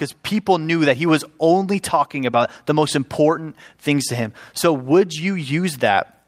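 At 2.31 to 2.35 s, between "he was only talking" and "the most important things", there is a short concealed packet loss. About 20 ms of the speech never arrived in time, and the receiver covered the gap by extending the preceding sound before blending back into the real signal. It comes across as a brief smear rather than silence. A plain dropout would leave a hard gap, and a click would be a sharp tick with no stretched sound around it.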